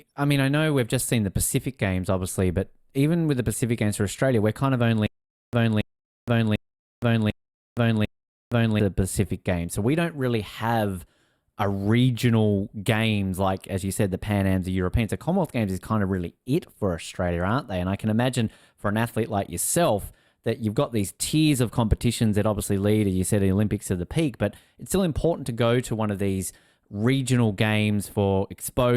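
Between 5.07 and 8.80 s, a stutter with silent gaps: one 281 ms burst recurs five times amid 465 ms silences, likely a stalled stream.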